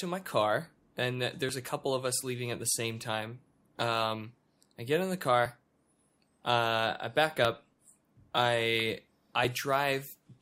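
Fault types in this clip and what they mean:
Overlap between stream segments: adjacent segments share time stamps, so the player discards under 20 ms of real sound at each join, every 2 s. Brief clicks or skips land at 1.49, 3.47, 5.46, 7.45 and 9.45 s, the first just after "my car and".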